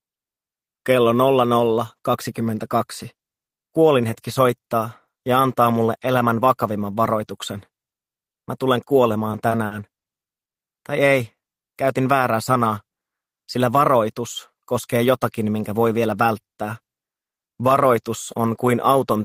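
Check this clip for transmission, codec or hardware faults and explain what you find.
Two transmission faults turn up, back to back near the 10-second mark, both the network-delay kind rather than codec or hardware trouble.

From 9.31 to 10.06 s there are repeated stalls (stutter). Packets kept showing up late, so the jitter buffer drained four separate times. Each time, the receiver stretched the last bit of sound to cover the hole, about 140 ms in total, with the longest single fill around 50 ms. That's roughly a fifth of the stretch spent on padding. Nothing actually drops out, but the audio hitches and drags through that passage.

Then at 10.44 s there's a call audio freeze lasting 120 ms. The sound goes silent for about 100 ms before picking up again exactly where it left off, so nothing is lost and the rest just arrives that much later. The likely cause is packets being held up in transit long enough for the buffer to run dry. 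The receiver filled the wait with silence instead of a fading buzz, and the playback delay jumped by about 100 ms once the audio resumed.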